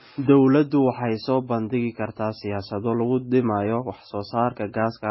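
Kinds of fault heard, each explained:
Transcoding between lossy codecs: the speech sounds dull and smeared throughout, with nothing above 5.6 kHz and two layers of swirly, watery artefacts heard together, likely from a very low-rate MP3 around 16 kbit/s later re-encoded as AAC-LC at 48 kbit/s, which kept the first codec's cut-off and damage.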